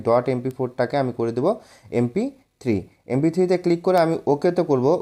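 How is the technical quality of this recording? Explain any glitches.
Two sharp ticks mar the recording. Each is a bit error spike. At 0.51 s and 3.98 s, one flipped bit throws a single sample out, peaking at about -16 and -4 dBFS.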